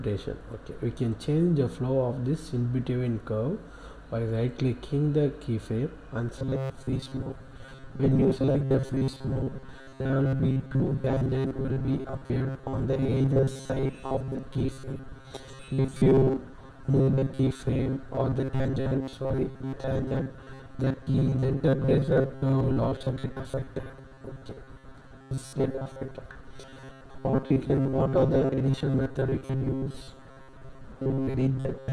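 Robotic sound from repeated short buffers runs from 6.39 s to the end of the clip. The audio turns into a rigid, metallic buzz fixed at 134 Hz, while still roughly following the underlying sound. The likely cause is new audio arriving too seldom, so playback keeps looping a fragment of about 7.5 ms, one period of that buzz, and skips the real signal. Roughly 70% of what is heard is repetition.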